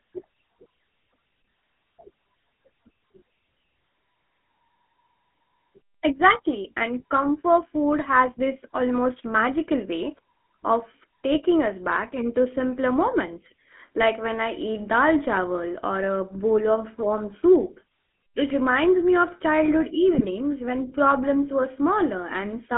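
Throughout, the speech carries GSM full-rate codec damage: the vocal tract is modelled and driven by a coarse pulse excitation, giving a plainly buzzy, gravelly roughness that fits a 13 kbps stream. A spectrogram shows energy confined to roughly 200 Hz to 3.4 kHz, with smeared harmonics.

From 20.14 to 20.29 s, between "reminds me of childhood" and "when problems were", GSM bit errors corrupt the decoder's filter, pitch and gain values. The sound breaks into squawks and gargling, consistent with about seven damaged 20 ms frames, visible as blotchy spectral bursts and sudden waveform level jumps.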